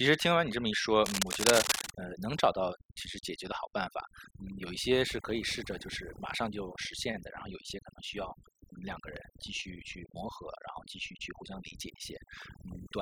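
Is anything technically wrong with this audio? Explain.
Yes. There are two problems: overdone noise removal across the whole speech clip, and a burst of cable scratch noise near the start.

Overdone noise removal is present from beginning to end. The noise reduction was set too aggressively for the amount of background noise in the recording. Every frequency band whose level sits close to the tool's noise estimate gets pulled down hard or switched off. Quiet parts of the speech fall below that threshold and are removed with the noise. What remains of the background breaks up into twinkling, warbling specks.

From 1.05 s to 1.90 s there is a patch of dense, irregular scratching and rustling laid over the speech, at roughly the same level as the speech itself. This is likely cable scratch noise. A worn cable, connector or control carrying a DC voltage is moved, and its contact resistance fluctuates rapidly, injecting uneven bursts of noise into the signal for as long as the movement lasts.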